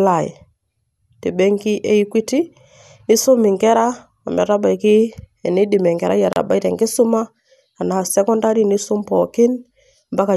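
Speech, with one fault. At 6.33 s a gap at a join of encoded pieces opens: a gap of about 33 ms with smeared edges. Two separately encoded pieces were joined untrimmed. Encoder start delay and end padding remained. The speech then resumes where it stopped.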